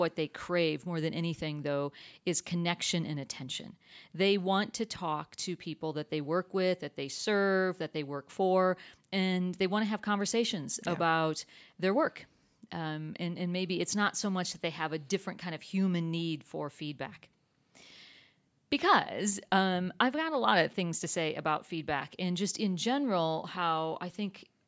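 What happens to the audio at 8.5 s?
Nothing goes wrong at 8.5 s: the speech carries on intact through that moment, with only the usual thinning of the lowest bass from call microphone processing.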